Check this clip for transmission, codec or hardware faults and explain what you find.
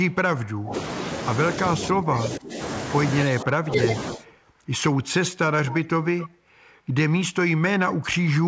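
Two faults recur through the speech, both pointing to the far end's echo canceller.

Echo leak at 0.10–0.15 s, 4.25–4.39 s, 5.65–5.79 s and 6.18–6.29 s: likely loudspeaker pickup slipping past cancellation. Delayed copies trail the speech by 271 ms, then 248 ms. They rise from about 35 dB below the speech to about 15 dB below.

Speech suppressed in double talk at 0.56–0.74 s, 1.71–2.59 s, 3.27–3.93 s and 4.12–4.26 s: the canceller clamped down during overlap, so the talker's level sinks by roughly 20 dB, 20 dB, 25 dB, then a shallower 10 dB.

The G.722 call path tops out at 8 kHz.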